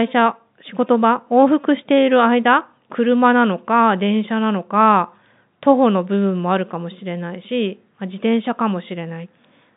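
No technical faults are audible.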